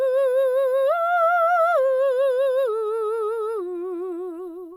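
No technical faults are audible.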